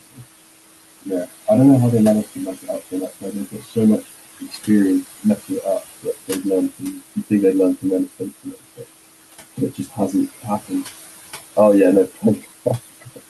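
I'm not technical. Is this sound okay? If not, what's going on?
No. Throughout, the background noise dips between words and rises under them. These are noise suppressor artifacts, from a filter turning down sound it takes for steady noise. The room's own background noise stays audible beneath the speech.

In places the speech itself turns faint or swallowed, because the suppressor mistook it for noise. This is speech cut by the noise suppressor, and it happens at 0.07–0.21 s, 2.24–8.82 s (about two seconds in total within that stretch), 9.57–10.85 s and 11.56–13.2 s.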